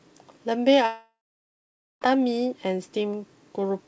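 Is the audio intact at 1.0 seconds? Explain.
No. From 0.86 to 2.03 s a long network dropout is the likely cause. The last sound smears into a fading buzz or hiss, then goes silent, unlike a brief packet-loss glitch.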